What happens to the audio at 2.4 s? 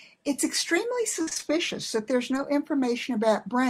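At 2.4 s the speech passes through a lost packet rebuilt from error correction, between 2.33 and 2.43 s. Packets went missing. The packets after them each carried a low-bitrate backup copy, and the decoder played those instead. So nothing drops out. About 60 ms of audio is rebuilt this way, which fits three lost packets. Those frames sound rougher and grainier than the speech around them.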